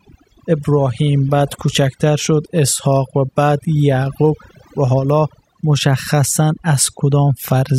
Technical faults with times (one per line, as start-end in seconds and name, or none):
0.00-7.79 overdone noise removal